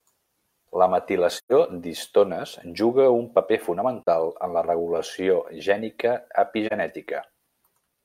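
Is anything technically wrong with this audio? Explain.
Yes. AAC frame loss with muting: the decoder zeroed missing frames, so overlapping windows fade the speech into soft holes. The longest runs from 1.36 to 1.52 s, before "d'histones juga un paper", a gap of about 128 ms that fits three lost frames. Shorter holes of about 43 ms, each consistent with a single frame, fall at 4.03 to 4.08 s, just before "en la regulació gènica", and at 6.67 to 6.73 s, right after it.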